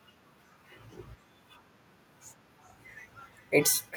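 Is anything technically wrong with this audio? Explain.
Yes. From 2.03 s to the end there is feedback echo between two devices: another device in the room replays this microphone's signal, and the echo canceller only removes its own device's playback. The speech comes back faintly, about 38 dB down, roughly every 0.4 s.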